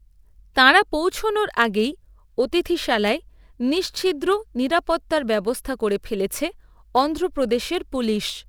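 From 1.49 s to the end of the clip, the speech carries a steady 100 Hz buzz, a rough, rapid chopping layered over the sound, while pitch and pacing stay at their normal rate. This is a block size mismatch (truncated): one stage hands over blocks longer than the next stage accepts, so the tail of every block is discarded. Each cut leaves a small discontinuity, and at 100 cuts per second those discontinuities fuse into the buzz.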